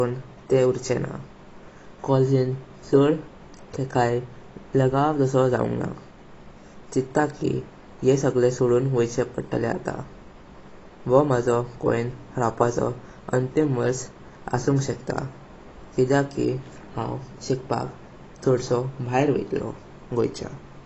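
AAC compression runs throughout this speech clip, from start to finish: nothing is present above 8 kHz, and the damage is plainly audible as a dull, smeared tone with a fizzy, warbling edge on sibilants and held sounds. The likely cause is AAC-LC encoding at a low bitrate, which fits roughly 24 kbps. The encoder has too few bits to spend, so it pulls its cut-off down and coarsely quantises or drops the remaining spectral detail.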